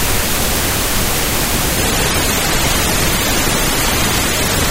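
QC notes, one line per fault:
1.77–4.71 s, adaptive stream at a lower bitrate: the player switched to a lower-quality rendition when the connection slowed, and the change is consistent with MP3 dropping from 128 to 32 kbit/s. The coarser encoding discards most of the upper band, so from 1.77 s the treble falls away, with more obvious smearing artefacts. The switch is abrupt and gapless, and the lower quality continues to the end.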